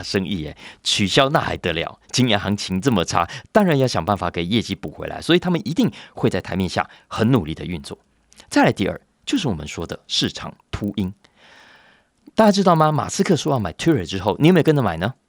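Speech, with a resampler restarted on every block throughout: a 25 Hz ticking present only under signal, from 40 ms blocks, showing as evenly spaced vertical spectrogram lines.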